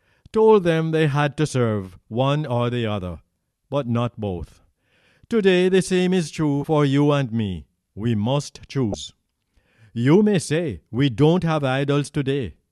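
At 6.61 to 6.64 s and again at 8.91 to 8.94 s, damaged data in a compressed stream breaks the sound. Each is a brief chirp, squawk, click or short hole. Corrupted bytes make the decoder misread frames, lose sync and hunt for the next valid frame header.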